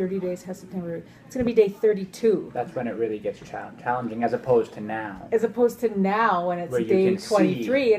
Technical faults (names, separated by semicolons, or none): none